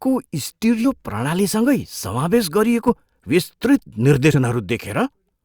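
Speech with compressed frames skipped at 0.84 s and at 2.87–2.89 s and 4.32–4.35 s. Each time, the speech jumps ahead by roughly 70, 40 and 50 ms, which fits whole 10 ms frames being dropped. On a spectrogram the harmonics break off mid-contour at each join.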